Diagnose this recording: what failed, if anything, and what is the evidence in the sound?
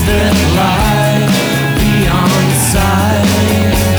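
The sample-format conversion likely reduced the audio to low bit depth without dither, about 5 bits, rounded rather than dithered. Throughout, a grainy distortion sits only about 25 dB below the signal and tracks it, so quiet passages turn gritty and the faintest parts sputter or vanish.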